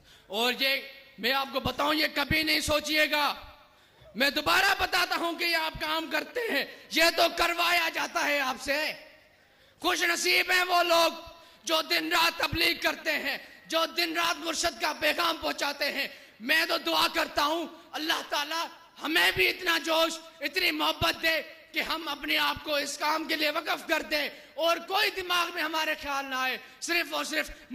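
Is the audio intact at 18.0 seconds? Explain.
Yes, at 18.0 seconds the audio plays through cleanly, with no dropout, click, distortion or other fault.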